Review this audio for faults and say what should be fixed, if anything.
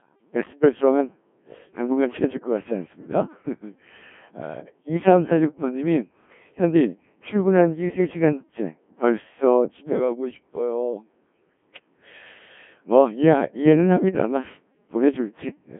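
Codec 2 vocoder artefacts run through the whole speech clip. The speech sounds robotic and buzzy because the decoder rebuilds it from sine waves driven by pitch, voicing, energy and a coarse spectral envelope, discarding the original waveform. Damage is heavy, which fits a very low rate near 1.3 kbit/s. The band is confined to roughly 150 Hz to 3.4 kHz, with nothing above 3.5 kHz. To prevent this, record or transmit through a waveform codec at adequate bitrate instead of a low-rate vocoder.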